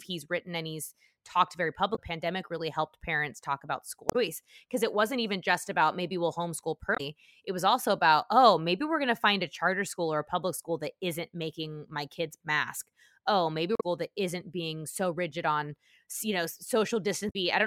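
At 1.92 to 1.99 s, after "and he's talked very", then 4.06 to 4.16 s before "because it wasn't even", 6.94 to 7.01 s, 13.75 to 13.83 s before "that isn't being", and 17.27 to 17.36 s, the speech is broken by short glitches from damaged data in a compressed stream. Corrupt frames throw the decoder out of sync until it finds the next header. Spectrograms show brief broadband smears; waveforms show 70 to 90 ms glitches.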